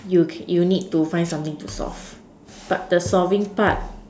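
Nothing goes wrong anywhere in this speech clip, so there are no technical faults to walk through here.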